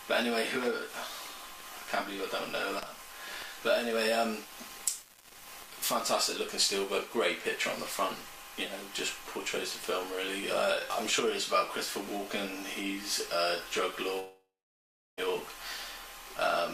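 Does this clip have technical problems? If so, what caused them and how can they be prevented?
Yes. From 3.66 to 6.03 s the sound turns grainy, with distortion about 20 dB below the signal that follows its level, likely low bit depth without dither, consistent with rounding to about 7 bits. Keep full resolution and add dither whenever reducing bit depth.

From 14.19 to 15.19 s a fading buzz or hiss gives way to roughly 0.7 s of silence, and about one second of audio never returns. This is likely a long network dropout that the receiver concealed. Use a larger jitter buffer, redundancy or retransmission on unreliable links.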